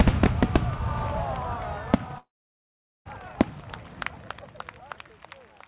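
Everyday sounds, carried narrow-band with nothing above 4 kHz. From 2.18 to 3.07 s the audio decays into a fading buzz, then about 0.8 s of silence. A long network dropout is the likely cause, and that stretch is lost.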